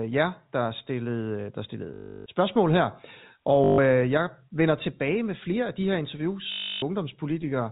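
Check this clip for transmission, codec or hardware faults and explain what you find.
There are three gaps where packet loss with last packet repeated occurred: 1.94 to 2.26 s, 3.64 to 3.78 s and 6.52 to 6.82 s. At each one, the receiver replayed the last packet until new ones arrived. This makes a robotic stutter that buzzes at about 50 Hz, which fits 20 ms packets. The stutter sits within the G.711 telephone band, which stops at 4 kHz.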